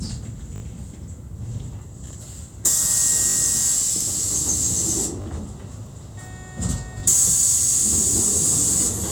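A repeated buffer fault occurs at 0.56–0.62 s, 3.30–3.36 s, 5.22–5.26 s and 7.00–7.02 s. Each time, a short segment that fits a 20 ms buffer replays three, three, two and then one extra time, producing a hard-edged stutter. No audio appears to be lost.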